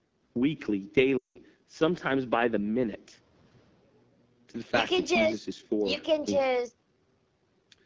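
Throughout the clip the speech carries the sound of the AMR wideband (HD Voice) codec at a very low rate. The roughness fits the 8.85 kbit/s mode, one of the two lowest. The codec rebuilds the voice from a pulse-driven vocal tract model, and with so few bits that model is coarse, so the speech sounds raspy and gritty rather than muffled. That texture separates it from plain low-pass filtering. The band ends near 7 kHz, below the 8 kHz limit of the call's microphone path, and the top part of it is synthetic hiss.

From 1.17 to 1.40 s come lost AMR speech frames. For about 180 ms, which fits roughly nine frames, the decoder had no good data and kept repeating its last pitch and vocal tract settings at falling gain. The sound drops to near silence within two frames, then returns weak and rough. Unlike a hard dropout or click, the gap is filled with a fading imitation of the preceding voice.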